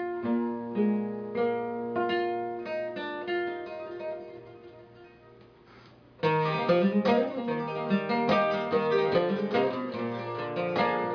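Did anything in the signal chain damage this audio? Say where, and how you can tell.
No, nothing along the way seems to have harmed this one, and I couldn't point to a single stage that left a mark on the sound.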